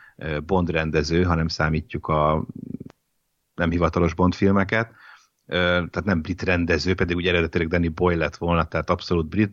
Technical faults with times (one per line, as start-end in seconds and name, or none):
none